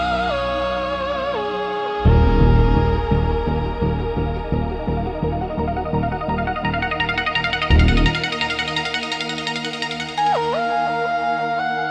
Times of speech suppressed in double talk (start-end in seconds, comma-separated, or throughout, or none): none